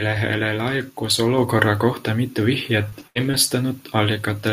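Speech whose level jumps abruptly at 1.38 s, when voice and background together rise by about 4 dB in one step. That is a microphone volume stepped up: the call software judged the input too quiet and raised the device's gain all at once, mid-stream. Around 2.89 to 2.93 s and again at 3.31 to 3.35 s there are brief smears, a momentary wobble where roughly 20 ms of sound was lost. These are short concealed packet loss, where the receiver extended the preceding sound to cover the missing packet before blending back into real audio. At 2.99 to 3.01 s, 3.15 to 3.17 s, 3.23 to 3.25 s and 3.33 to 3.35 s the sound turns briefly rougher and noisier for about 20 ms each time, with no actual gap. Each is a lost packet rebuilt from error correction, where the decoder played the low-bitrate copy carried in the following packet instead of the full-quality original. From 3.07 to 3.17 s the sound holds and fades into a smeared tail, then picks up further along, with about 80 ms of audio gone. 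This burst of packet loss left the receiver continuing the last sound while turning it down until real packets arrived again.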